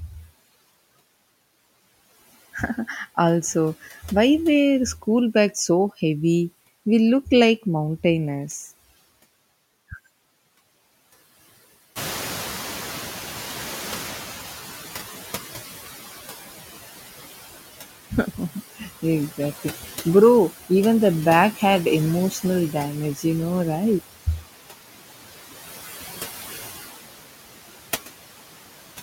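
Noise suppressor artifacts run through the whole clip. The suppressor pulls steady noise down by about 14 dB, frame by frame. The background dips in the gaps and swells back under the speech.

At about 12 s the room noise jumps by about 16 dB. The noise suppressor is catching up from 11.95 to 15.73 s. Its estimate of the noise lags, so the louder noise first comes through with little reduction. Over about 3.8 s it sinks by about 12 dB.

Speech is cut by the noise suppressor three times. The suppressor mistakes brief stretches of speech for noise and turns them down with the background. At 18.77 to 19.04 s the sound drops by about 14 dB. At 21.53 to 21.62 s, right after "even the bag", it drops by about 13 dB. At 23.15 to 23.25 s, just before "you know right", it drops by about 10 dB. Each lasts about 0.1 to 0.15 s, and the sound there goes faint and swallowed.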